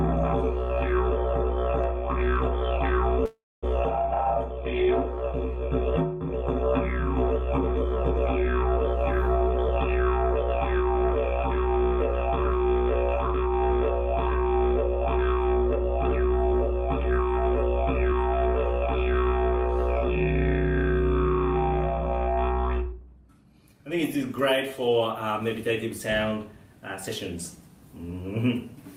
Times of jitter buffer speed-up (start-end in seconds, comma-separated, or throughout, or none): 16.09-20.08, 22.83-24.41